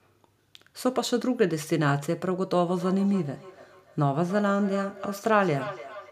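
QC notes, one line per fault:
2.65 s to end, feedback echo between two devices: the speech comes back roughly every 300 ms, thin and ringing, peaking about 13 dB below the direct sound. A second device nearby replays the call, and this microphone recaptures it, beyond its echo canceller's reach.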